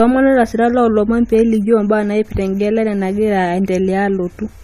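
Speech whose low-bitrate audio was likely saved at a high bitrate: the first encode's artefacts persist throughout, and nothing remains above 14.1 kHz.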